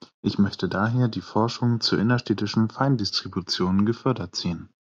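A steady 43.1 Hz buzz runs through this speech from start to finish, at normal pitch and speed: a block size mismatch (truncated), with block tails discarded, which fits 1024-sample blocks.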